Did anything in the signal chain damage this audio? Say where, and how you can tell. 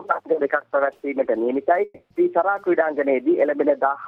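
Yes. The damage points to the network stage, likely a long network dropout. At 1.84 s the sound stops being real audio. The last sound carries on as a fading buzz or hiss for about 260 ms. About 30 ms of silence follows. Real audio returns at 2.11 s. The underlying material jumps forward rather than resuming where it stopped. That stretch was never received. The receiver stretched the last sound to cover the gap, then gave up and went quiet.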